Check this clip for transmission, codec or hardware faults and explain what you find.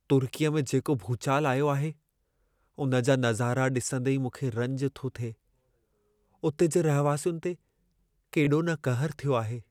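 One transmission fault appears, a single Bluetooth stutter. From 8.45 to 8.47 s, a slice of about 21 ms replays because one late or lost packet left the receiver repeating its buffer. This gives a brief double-hit rather than the silent gap of a dropout, and the speech resumes further along.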